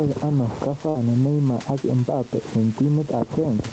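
Gain pumping runs through the whole speech clip, with the level swinging by around 10 dB. The likely cause is input gain set far too high for the microphone, with a fast limiter or compressor clamping down on every loud syllable. Loud and quiet stretches are pulled close together, and the speech sounds flattened and squeezed.

A burst of packet loss follows from 0.89 to 0.96 s. A short run of audio, roughly 50 ms of it, never reached the receiver in time to be played. The receiver filled the hole for about 53 ms by stretching the last sound it had and fading it down. The gap is heard as a brief held buzz or dying hiss. The speech then jumps ahead with that stretch missing.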